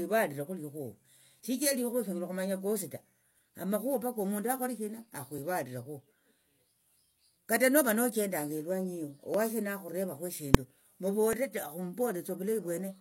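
Overlap between stream segments at 1.40–1.44, 3.39–3.43, 9.34–9.38 and 11.33–11.37 s: overlapping timestamps on 2-second segments make the player trim roughly 40 ms of real speech each time, so the waveform jumps with a small click or skip.

Invalid numbers at full scale at 10.55 s: a calculation produced invalid values that were pinned to maximum amplitude for about 1.45 ms, consistent with a 64-sample block, giving a single sharp bang.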